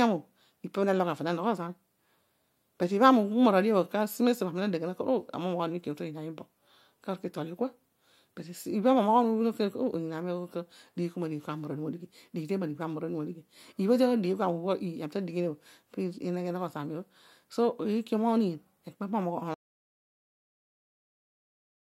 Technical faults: audio dropout to silence

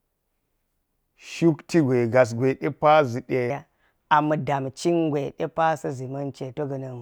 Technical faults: section at the wrong speed

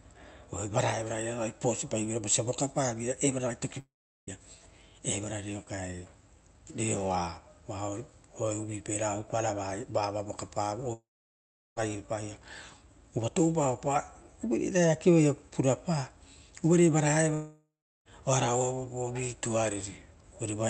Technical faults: long network dropout

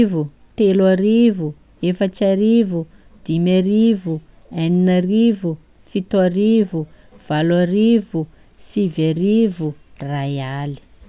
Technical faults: none

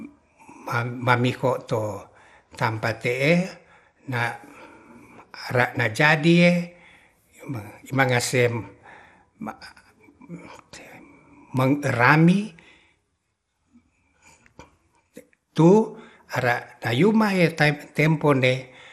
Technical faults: MP2 compression

